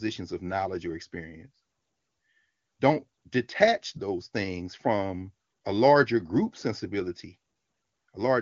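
No technical faults occur anywhere in this speech recording, so there are none to describe in time order.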